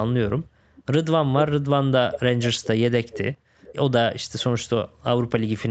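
Echo leak in this speech recording appears as brief repeats at 0.75, 2.12, 2.41 to 2.67, 3.11, 3.6 and 4.39 s, each trailing the talker by about 0.41 s and sitting roughly 10 to 30 dB down, likely loudspeaker pickup that the far end's echo canceller failed to suppress.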